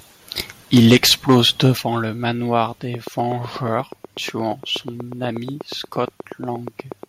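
Right at the start, from 0.74 to 1.38 s, there's a microphone overload: the peaks run about 7 dB past the converter's ceiling, with something like 5 percent of samples flattened. That squared-off top gives the loud syllables a harsh, crackly edge, which most likely comes from the input gain being set too high.

Inside that stretch, at 0.78 s, the microphone volume steps down by about 2 dB. The speech and the room noise both drop together in one quick step. That's most likely the call software spotting the overload and pulling the input level back.

A second, lighter overload hits from 1.64 to 1.67 s, just before "le manoir". It's only about 1 dB over, with roughly 1.5 percent of samples clipped, so you get a brief gritty flick rather than sustained crackle. The likely cause is the same hot input.

At 1.77 s, just before "le manoir", the microphone volume steps down again, this time by a much bigger 8 dB. 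Everything audibly sinks in level at once, most likely a second automatic gain correction reacting to that clipped peak.

Then, after "le manoir", a train of clicks runs from 2.94 to 7.04 s. There are around forty near-identical ticks at a regular 8.3 per second, peaking somewhere around 10 dB above the speech, so they sit clearly on top and keep ticking through the pauses. That steady pulse most likely comes from electrical interference or a faulty connection or power supply.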